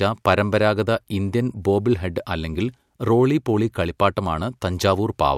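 Speech carrying a faint hiss on louder, brighter syllables throughout: sample clock jitter, a microsecond or so of timing wobble, error around 40 dB down.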